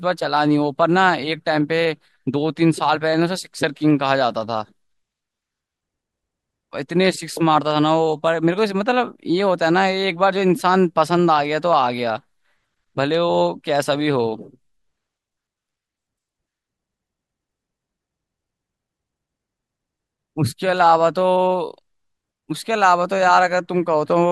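Speech recording, with no technical faults to be heard anywhere in the signal.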